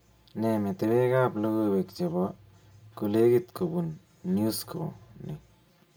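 Throughout, channel delay causes comb filtering: one channel trails by about 5 ms before mono summing, cutting notches from roughly 100 Hz upward and leaving the speech hollow.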